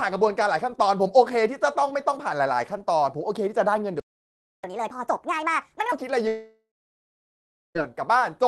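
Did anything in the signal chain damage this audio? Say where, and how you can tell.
Yes. At the playback stage, the player likely ran dry or had its thread blocked, causing a playback stall from 4.00 to 4.64 s. The speech cuts off mid-flow for about 0.64 s of silence, then resumes.

Also at playback, the player then clears its backlog by resampling, giving catch-up at higher speed from 4.64 to 5.92 s. The speech runs at 1.5 times normal speed, with pitch raised roughly seven semitones.

In the network, audio likely stopped arriving, producing a long network dropout from 6.27 to 7.77 s. The receiver extends the last sound as a fading buzz or hiss, then leaves about 1.1 s of silence. The speech returns further on, with roughly 1.5 s never played.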